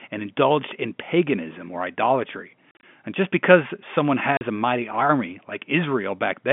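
Speech carried over a G.711 telephone-band line drops packets that the receiver fills with silence (packet loss filled with silence). This leaves hard-edged holes scattered over 2.71–2.83 s after "in paganism or idolatry", and a 40 ms gap at 4.37–4.41 s between "just because someone" and "a mighty army". The gap lengths fit 10 ms packets.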